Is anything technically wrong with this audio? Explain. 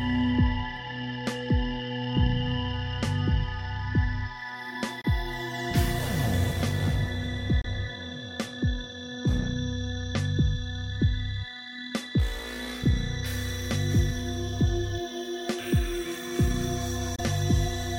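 Yes, there are three short gaps where the sound cuts out, at about 5.01 to 5.06 s, 7.61 to 7.66 s and 17.16 to 17.20 s. Each hole is roughly 23 ms with abrupt edges or a fade of a few milliseconds, and the audio picks up afterwards as if it had kept playing underneath. That's likely a Bluetooth dropout: a packet didn't reach the headphones in time, so the output went silent until the next good one arrived. The gap length fits a single lost frame each time.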